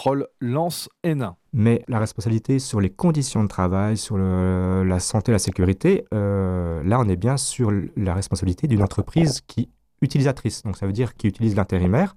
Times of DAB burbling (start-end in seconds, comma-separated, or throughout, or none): 1.83-2.04, 4.74-5.63, 8.80-9.38, 11.70-11.85